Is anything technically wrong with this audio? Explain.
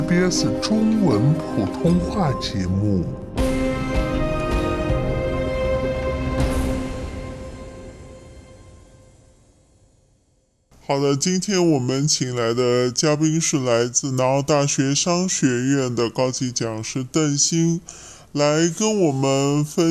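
Yes. Wrong sample rate, present throughout the clip: the audio is being played back at a slower rate than it was captured at, with no conversion between the two. The slowdown factor of about two-thirds fits 48 kHz material played at 32 kHz. Because speed and pitch are tied together, everything runs at 0.667 times its proper speed and sits about 7 semitones lower, so the sound comes across as sluggish, dragged out and noticeably deep.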